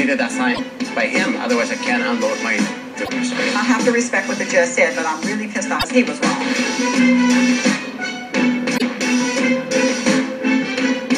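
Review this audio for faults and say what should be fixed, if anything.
Damaged data in a compressed stream shows up four times, at 0.51 to 0.59 s, 3.02 to 3.09 s, 5.76 to 5.85 s and 8.74 to 8.82 s, each a brief garbled burst of roughly 70 to 85 ms. At each point some of the encoded bytes are wrong or missing, so the decoder misreads those frames, loses its place in the stream and outputs junk until it locks onto the next valid frame header. To prevent it, carry the file over a checksummed or error-corrected transfer and verify its integrity before decoding.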